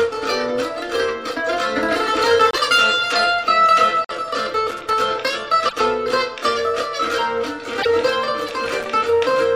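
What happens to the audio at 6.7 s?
At 6.7 s the audio carries a 375 Hz buzz, present for the whole clip, from a filter restarted on every block. The filter drops its state at each block boundary, which fits a 128-sample block, so each block starts with a small transient that rises and falls with the signal level.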